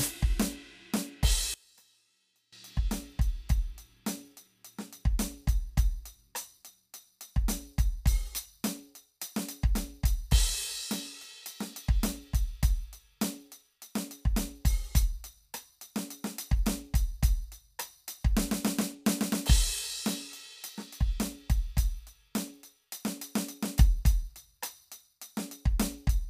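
A music clip: from 1.54 to 2.53 s the level drops about 25 dB to a faint residue rather than silence, likely one channel inverted cancelling in mono, unlike a dropout.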